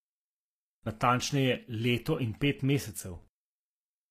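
A speech clip with plainly audible codec damage throughout: the top end is rebuilt rather than real, s sounds turn gritty and lispy, and nothing sits above 14.9 kHz. That's likely HE-AAC compression at a low bitrate, around 24 kbps, faking the treble from copied lower bands.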